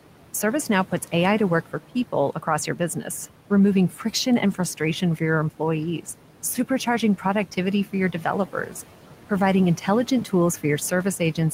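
Noise suppressor artifacts run through the whole speech clip. The suppressor judges, frame by frame, which frequency bands hold steady noise and pulls them down by about 12 dB. The room noise, sitting about 17 dB below the speech, therefore sinks in the gaps and swells back up under the speaking.

Speech cut by the noise suppressor appears from 2.76 to 3.09 s and again from 8.53 to 8.74 s. At each point the suppressor took quiet parts of the speech for background and lowered them with the noise, by about 8 dB at the deepest. Only about a tenth of a second of sound is affected each time. Those fragments come across as swallowed or faint, like clipped endings or soft consonants fading out.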